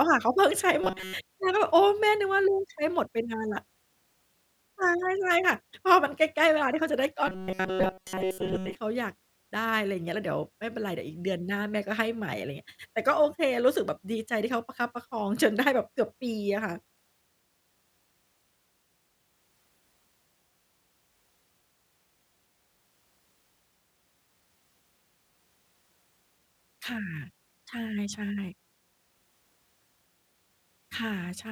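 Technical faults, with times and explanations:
0.81–1.14 s and 7.27–8.75 s: robotic sound from repeated short buffers. The speech becomes a rigid metallic buzz at 188 Hz that loosely tracks the words, likely because a chunk of about 5.3 ms is looped to cover late data while most of the real audio is skipped.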